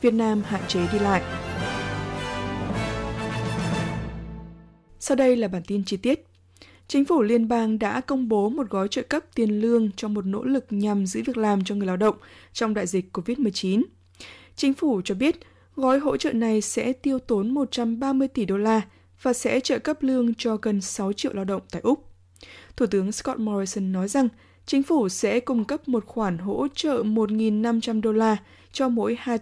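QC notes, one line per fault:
Nothing stood out on listening.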